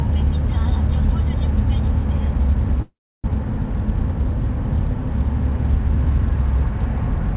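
At 2.82 s the sound stops moving forward and a fading buzz continues the last fragment, thinning to about 300 ms of silence before normal sound resumes at 3.30 s. This is a call audio freeze. The likely cause is a stall in packet delivery that emptied the jitter buffer, so the receiver padded roughly 420 ms with concealment. Nothing is skipped; everything after the gap arrives that much later. The surrounding audio has no content above 4 kHz, as expected of a narrowband call codec.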